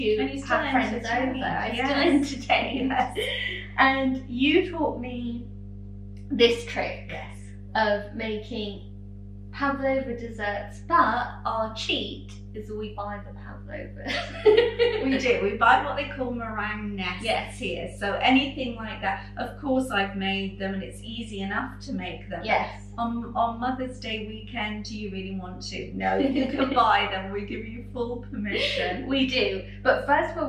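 A steady low tone at 50 Hz sits under the sound for the whole clip, fairly prominent at roughly 15 dB below the signal. This is mains hum: a ground loop or nearby transformer is coupling the 50 Hz power line into the audio path.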